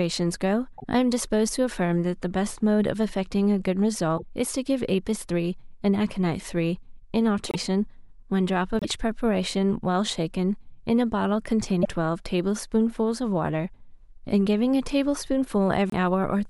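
Speech with brief garbled glitches, each 40–70 ms, at 0.77, 4.17, 7.49, 8.79, 11.82 and 15.90 s, where the sound skips ahead, likely from a broken MP3 bit reservoir after lost 26.1 ms frames.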